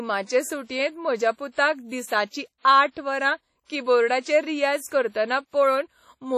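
Across the whole speech clip there is heavy WMA compression, likely from a low-bitrate encode around 32 kbps. Quantisation noise smears across long transform blocks, giving ringing, a washy sound and hiss that swells with the voice. A spectrogram shows nothing above 14.2 kHz and patchy, zeroed weak harmonics.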